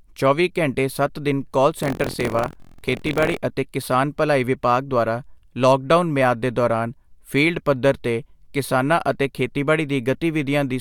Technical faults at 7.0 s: none

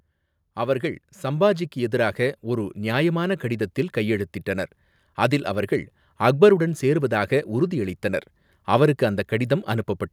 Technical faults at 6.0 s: none

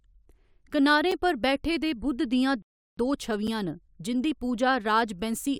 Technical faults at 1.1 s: gap between chunks

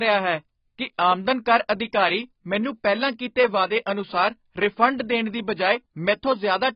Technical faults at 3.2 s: AAC compression

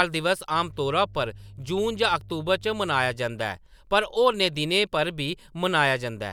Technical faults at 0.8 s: mains hum

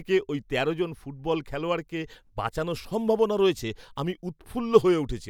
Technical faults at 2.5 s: none

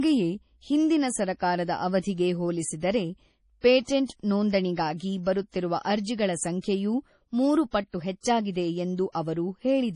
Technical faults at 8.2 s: MP3 compression; pre-echo

